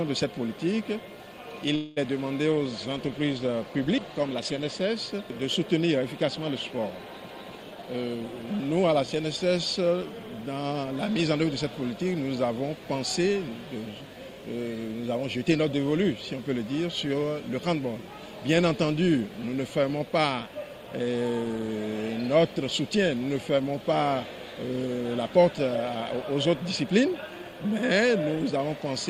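A call recording with three transport faults. From 1.75 to 1.98 s the sound stretches into a fading buzz for about 210 ms, likely a call audio freeze where the jitter buffer ran dry; a smeared, decaying band appears on the spectrogram before normal detail resumes. A call bitrate drop from 2.51 to 4.90 s halves the rate from 32 to 16 kbps, making the sound coarse and muffled, with the upper spectrum visibly thinned and cut off. Between 7.71 and 9.09 s a jitter buffer speed-up plays the audio at 115% with unchanged pitch, trimming about a fifth of a second; the waveform's events arrive noticeably compressed in time.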